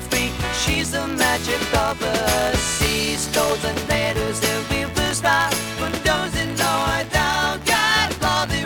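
Buffer tearing runs throughout, a rattling 86.1 Hz buzz that fits a 512-sample buffer, with each period splicing in a sliver of audio about 20 ms old.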